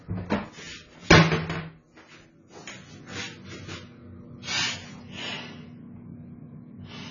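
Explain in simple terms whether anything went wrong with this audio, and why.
The sound is dull and muffled from start to finish, with nothing above 7 kHz. Its detail is smeared, with a fizzy, warbling texture. The likely cause is heavy AAC compression, which discards high sounds and fine detail to shrink the file.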